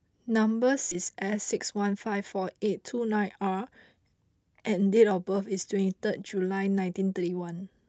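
Speech, carried over a call codec whose top end stops near 8 kHz. At 0.91 to 0.93 s there is a skip ahead. Roughly 0.7 s of audio is missing. Playback jumps straight to later audio with no fill, likely because the jitter buffer dropped queued audio to shed the built-up delay. Two stretches of jitter buffer speed-up follow. From 1.52 to 2.15 s the speech runs at 108 percent. From 2.84 to 4.15 s it runs at 110 percent. The pitch stays the same. The receiver trimmed pitch-period slices, about 50 ms and then around 150 ms, to drain an overfull buffer. As a result the speech sounds hurried.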